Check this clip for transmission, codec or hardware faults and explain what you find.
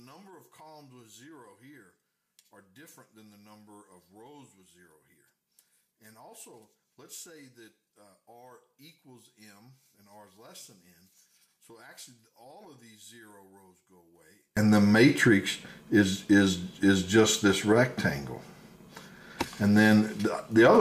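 One fault: from 0.0 to 14.57 s the mono sum sits about 32 dB down, a faint residue, likely from one channel inverted cancelling the shared content. The waveform looks nearly flat there, and the spectrogram shows a dim trace.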